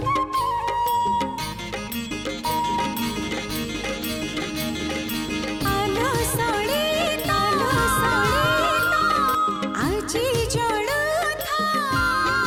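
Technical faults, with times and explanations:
2.45–9.35 s, doubled audio track: a second full-band copy runs about a second and a half behind, roughly as loud as the original, likely from a slower capture path. Unlike an echo, it has no decay or room colour and cuts in and out abruptly.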